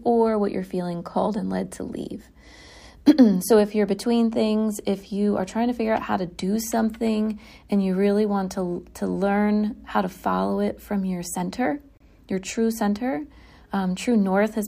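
A speech clip with one gap at a join of encoded pieces. It falls between 11.97 s and 12.00 s, right after "it from your center" and before "your true center". The break lasts about 30 ms. The audio was encoded in separate pieces and then joined untrimmed. Each encoder run leaves a start delay of silence and pads its final frame. Both remain at the join. The speech then resumes where it stopped.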